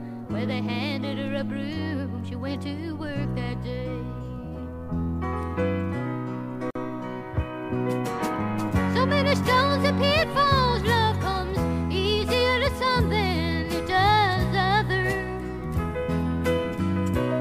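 At 6.71 s the continuous sound drops out for about 48 ms, returning at 6.75 s: a gap at a join of encoded pieces. Two separately encoded segments were butted together untrimmed, so the encoder's start-up delay and end-of-stream padding both survive as silence. It is heard as a brief hole, after which the sound resumes where it left off. The waveform shows a flat-line notch, and the spectrogram a vertical blank strip with slightly blurred edges.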